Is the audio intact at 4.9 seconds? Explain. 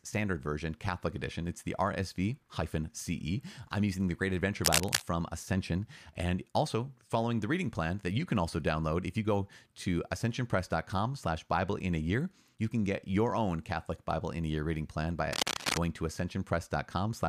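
No. From 4.64 to 5.03 s, cable scratch noise covers the speech. Dense, uneven bursts of scratching and rustling sit at roughly the same level as the speech. The likely cause is a worn cable or connector being moved, making its contact resistance jump rapidly.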